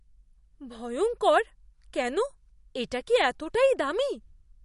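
From start to finish the speech carries plainly audible damage, likely MP3 compression. Nothing reaches above 11.1 kHz, so the top is sliced off, and the thin bit budget, which fits roughly 48 kbps, leaves a watery, swirly texture as weak detail flickers between frames.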